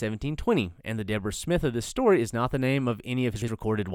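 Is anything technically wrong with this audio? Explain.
Yes. Chunks out of order occur from 3.36 to 3.48 s, right after "not the name of". Within that span, a 60 ms chunk of audio arrives one chunk late and plays after the chunk that should follow it, so two neighbouring pieces are swapped. No audio is missing, but the reordering creates three hard joins where the waveform doesn't line up. The result is a brief jumbled, garbled moment.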